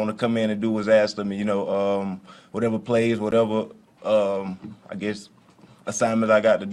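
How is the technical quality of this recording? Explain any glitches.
The recording has no glitches to explain. Nothing in the audio stands out as a technical problem.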